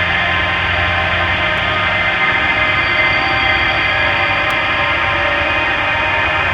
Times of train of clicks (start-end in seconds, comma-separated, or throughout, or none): none